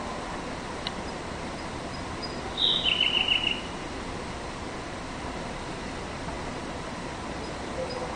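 No technical faults can be heard anywhere here.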